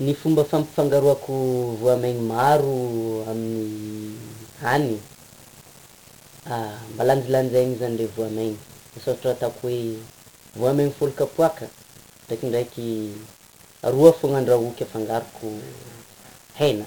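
From start to finish, the speech is carried by 1-bit DFPWM compression. Each sample keeps only one bit. That bit just nudges a running level up or down. The coder never stores the waveform itself. The damage here is heavy. A thick, broadband fuzz rides under every syllable. Crackle breaks through as the level chases the signal. The upper treble drowns in hiss. The overall grain fits a one-bit stream at about 48 kbps.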